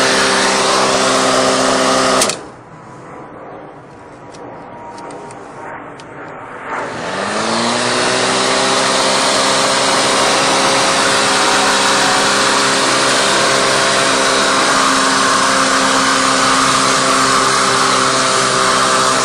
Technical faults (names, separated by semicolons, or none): feedback whistle